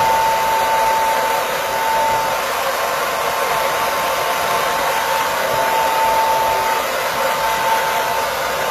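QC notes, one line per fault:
Throughout: HE-AAC compression, plainly audible. The treble has a synthetic sheen: high-frequency detail sounds gritty and metallic rather than natural, and nothing is present above 14.9 kHz. The likely cause is spectral band replication, where only the lower spectrum is coded and the top end is rebuilt by copying lower bands upward under a coarse envelope. The replicated harmonics fail to align with the real ones, and the degree of damage fits a low bitrate of about 24 kbps.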